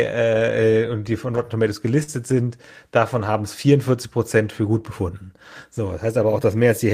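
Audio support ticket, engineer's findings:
Short concealed packet loss at 2.03–2.11 s. About 40 ms of speech never reached the decoder in time; receiver-side concealment filled the hole by extending the preceding sound, then crossfaded back into real audio. Audible as a brief smear or wobble in the speech, with possible loss of a short consonant. Probable component: network path or jitter buffer upstream of the decoder.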